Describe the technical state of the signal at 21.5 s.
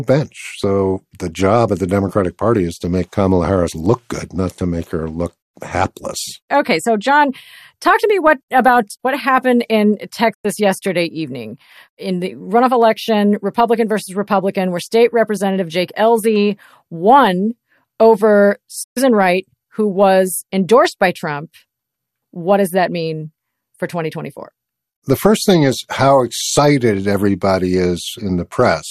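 At 21.5 s the signal is intact, with no fault present at that moment.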